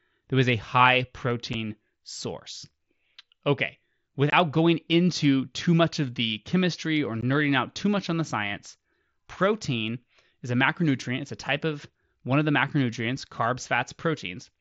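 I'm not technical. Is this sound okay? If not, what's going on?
No. The speech drops out three times, very briefly. You hear tiny holes with sharp edges at 1.53 seconds, from 4.30 to 4.33 seconds, and at 7.21 seconds. Each can sound like a small click or skip. This is unconcealed Bluetooth headset packet loss. The headset sends sound to the phone in small chunks lasting a few thousandths of a second. A few chunks never arrived, and nothing filled the gaps, so silence or an idle pattern was left in their place.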